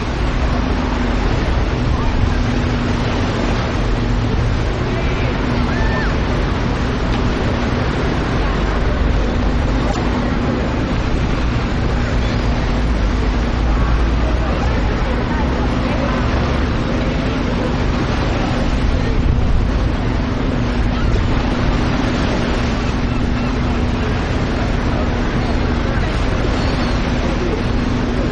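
You'll hear three short glitches, at 9.87 to 9.97 s, 14.61 to 14.67 s and 21.12 to 21.19 s. Each is a corrupt frame decoded: damaged bits in a few compressed frames got played anyway, throwing energy to the wrong frequencies. The first and last are loud, peaking around -5 dBFS.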